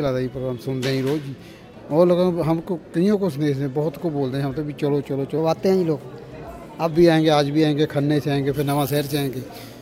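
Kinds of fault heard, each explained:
Section at the wrong speed: From 5.38 to 6.91 s the sound runs 1.12 times too fast, so it rises by about two semitones and hurries at the same moment, then drops back to normal. Because pitch and tempo shift together, this is not a pitch-correction or formant effect, which would change pitch while keeping timing intact. The likely cause is that this stretch was played or edited against the wrong clock.
Pre-emphasis left on: From 8.54 s to the end, the treble climbs steadily with frequency, reaching about 13 dB more at 10 kHz than at 1 kHz. That matches the FM 75 µs emphasis curve, with no matching de-emphasis applied afterward. The sound turns thin, bright and hissy, with sharp sibilance. It differs from a simple treble shelf because the lift keeps rising smoothly along that fixed curve rather than levelling off.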